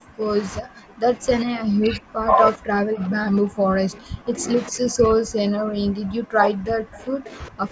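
Speech suppressed in double talk: an echo canceller, likely unable to separate the near talker from loudspeaker echo, turns both down. At 0.0–0.29 s, 0.6–1.26 s, 1.43–2.38 s, 2.57–4.48 s and 4.69–7.71 s, the speech sinks by up to roughly 40 dB.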